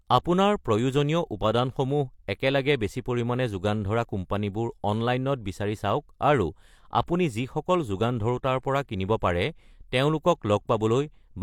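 At 7.07 s there is pre-echo: a burst of hiss, about 14 ms long, arrives just ahead of a sharp onset in the speech. A transform codec quantises each block as a whole, so when a transient lands near the end of a block, the noise budget set by that loud attack is spread back across the quiet samples before it. The result is a brief smear that blunts the attack's edge.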